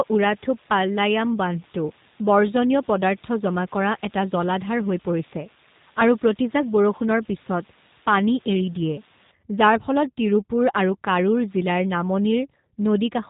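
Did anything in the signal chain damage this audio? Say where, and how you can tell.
Yes. The speech passed through a G.729 codec. Everything above 3.8 kHz is gone, and the voice sounds rough and synthetic, which fits an 8 kbit/s stream. The codec rebuilds each 10 ms frame from a filter and a few pulses. A spectrogram shows a flat ceiling near 3.8 kHz.

Low bit depth with dither comes from a sample-format conversion and runs from 0 to 9.31 s. A steady, even hiss sits around 25 dB below the speech, with no distortion, which fits about 7 bits. On a spectrogram, a uniform noise floor fills every gap and stops abruptly at 9.31 s.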